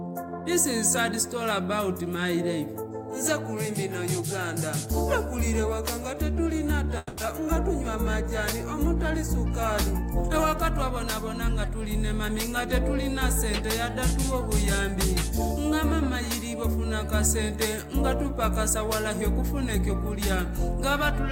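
From 6.97 to 7.19 s, likely a long network dropout: about 200 ms of audio never arrived, and the receiver covered the gap with a fading buzz or hiss that continues the last sound. The spectrogram shows smeared, repeating bands, and the waveform a decaying periodic envelope before an abrupt restart.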